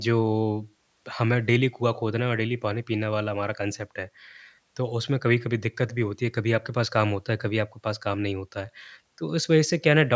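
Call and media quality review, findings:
No faults found in the speech recording. Nothing in the audio path needs follow-up.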